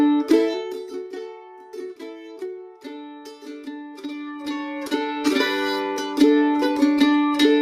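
Zipper noise appears from 0.43 to 1.14 s and again from 3.99 to 5.4 s. The level is moved in 1 dB jumps with no smoothing between them, and each jump puts a small click into the waveform. The first pass drops the level by about 15 dB at around 30 steps a second, giving a fast zipping sound. The second raises it by about 15 dB at roughly half that rate, so the ticks are more widely spaced.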